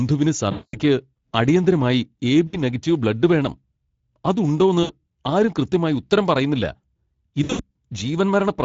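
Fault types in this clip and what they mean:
Speex codec: a CELP speech codec whose coarse excitation coding leaves this speech plainly hoarse and noisy, which fits a rate around 16.8 kbps. On a spectrogram the harmonics look grainy and smeared rather than cleanly striped, throughout the recording.
VoIP packet loss concealed by the speech codec: the decoder filled missing packets by extending its last pitch and filter at falling gain, giving four fading stretches of 60 to 220 ms. Spectrograms show frozen, dimming bands; the waveform shrinks, recovering only gradually afterwards.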